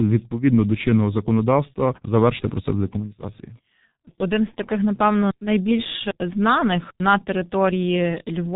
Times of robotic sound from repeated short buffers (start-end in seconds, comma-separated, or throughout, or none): none